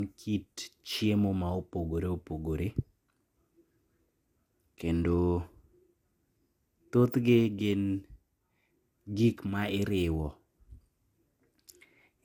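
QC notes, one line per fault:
throughout, generation loss: swirly, hollow speech with smeared consonants and nothing above 19.5 kHz, likely from about ten re-encodes through something like MP2 at 128 kbit/s.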